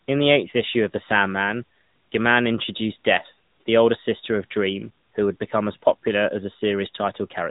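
Throughout the speech, the signal has passed through the AMR narrowband mobile codec at 10.2 kbps. The audio is squeezed into a telephone band with nothing above 3.8 kHz, and a pulse-driven vocal-tract model rebuilds each frame, leaving the voice muffled, plainly buzzy and synthetic.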